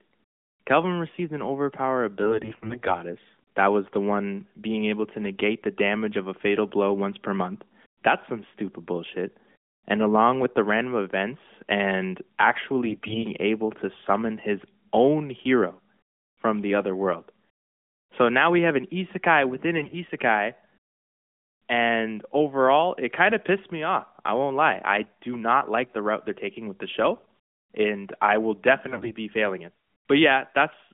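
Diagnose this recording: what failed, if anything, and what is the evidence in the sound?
AMR bit errors on the radio link: at 2.22–2.94, 12.86–13.24, 19.76–19.96, 27.18–27.26 and 28.88–29.12 s the speech turns hoarse and gargly while keeping pitch and level. Flipped low-priority bits misplace excitation pulses, so a spectrogram shows harmonics smeared into noise below 3.5 kHz.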